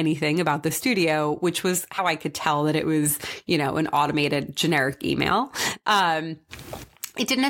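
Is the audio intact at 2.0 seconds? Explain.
No. At about 1.97 s, between "the studio which was" and "I could tell that", compressed frames are skipped. Roughly 70 ms of speech is missing, which fits three dropped 26.1 ms frames, and the overlapping neighbouring frames smear the jump into a brief blip.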